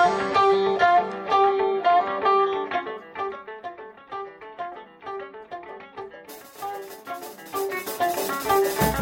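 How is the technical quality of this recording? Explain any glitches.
The music has one audible glitch, a zipper noise, while the level drops.

Zipper noise, 2.55 to 3.64 s: a roughly 15 dB level cut is applied in about 200 unsmoothed steps a second, each step clicking, producing a fine buzzing tick.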